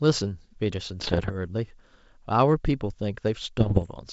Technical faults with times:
1.00-1.32 bit errors on an ADPCM link
3.60-3.85 bit errors on an ADPCM link

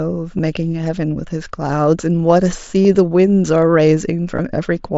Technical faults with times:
0.38 concealed Bluetooth headset packet loss
2.83-2.85 concealed Bluetooth headset packet loss
4.36-4.39 concealed Bluetooth headset packet loss

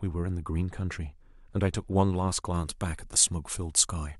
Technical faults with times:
2.54-4.19 pre-emphasis left on

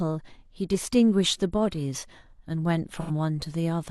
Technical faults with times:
0.35-0.42 AAC frame loss with concealment
2.93-3.11 AAC frame loss with concealment

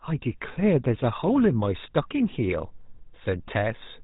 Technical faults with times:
0.00-4.03 GSM full-rate codec

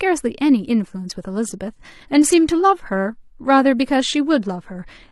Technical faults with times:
1.04-5.12 adaptive stream at a lower bitrate

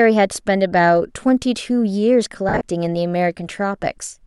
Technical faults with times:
2.49-2.61 lost LE Audio frames

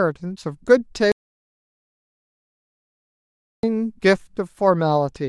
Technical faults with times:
1.12-3.63 audio dropout to silence

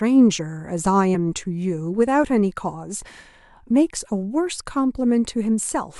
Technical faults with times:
1.14 compressed frames skipped

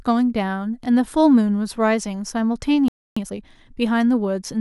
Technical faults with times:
2.88-3.17 playback stall
3.17-3.44 time-compressed catch-up

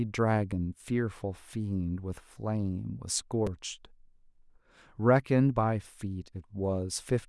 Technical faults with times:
3.47 repeated buffer

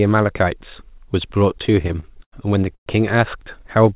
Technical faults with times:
1.52-2.34 repeated stalls (stutter)
2.74-2.88 call audio freeze

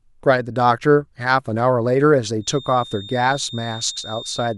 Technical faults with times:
2.37-4.58 feedback whistle

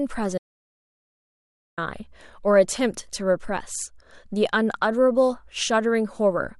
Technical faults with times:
0.38-1.78 audio dropout to silence

